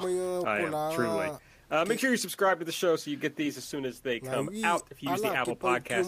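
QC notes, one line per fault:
No faults found on the speech; nothing to log.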